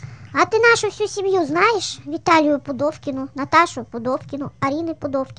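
From start to finish the speech runs fast and high, the signature of a wrong sample rate. Audio captured at 32 kHz is being played at 44.1 kHz with no conversion, so everything moves about 1.38 times too quickly and pitch rises by roughly five and a half semitones. Voices sound chipmunk-like and rushed. On a spectrogram, harmonics and formants sit uniformly higher and events are compressed in time; the waveform shows shortened syllables.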